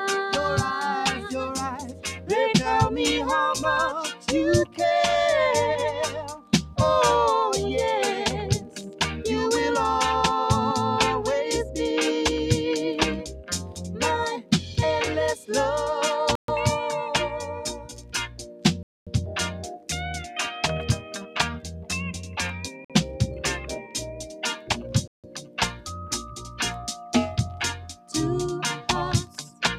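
A speech-tuned noise suppressor has been left running on this non-speech audio for the whole clip. It treats steady tones, ambience and decaying tails as noise, so the level keeps swinging by a few decibels. Onsets pass while sustained material sinks, and the result pumps and thins. On a spectrogram, held partials and reverb tails fade or break into patches while transients stay bright. The waveform envelope breathes unevenly instead of following the sound. Six stretches show sound cut by the noise suppressor more deeply, with drops of about 9 to 10 dB: 1.13–2.3 s, 4.14–6.53 s, 8.59–9.0 s, 13.26–15.5 s, the long span 17.43–26.36 s, and 27.95–29.62 s. Inside each span, roughly half a second to a second (around three seconds in the long one) is pulled down. Sustained portions and decays are clipped short and attacks survive. These show up as sudden dark gaps across the spectrogram's steady bands and as collapsed envelope sections on the waveform. 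Separately, there are four hard dropouts to silence at 16.35–16.48 s, 18.83–19.07 s, 22.85–22.90 s and 25.08–25.24 s, lasting from about 50 ms to nearly a quarter second. Playback then picks up again. These are likely Bluetooth stalls, where the headphone buffer ran empty while delayed packets were resent. Each appears as a flat near-silent line in the waveform and a dark vertical slot on the spectrogram.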